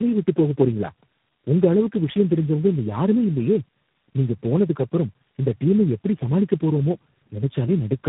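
Throughout, tandem speech coding: nothing above 3.8 kHz, and a rough, muffled, warbly quality that points to about four low-rate speech codecs, each re-encoding the previous one's output.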